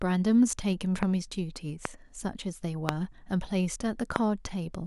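Loud pops occur in this speech clip at 1.03–1.05 s, 1.85–1.87 s, 2.89–2.91 s and 4.16–4.18 s. Each is a single sharp crack about 20 ms long that peaks about 20 dB above the speech, which carries on underneath. The likely cause is a sudden voltage step or pulse, from a plug, switch, static discharge or driver glitch, entering the signal path, where the following circuitry shapes it into a brief, hard transient.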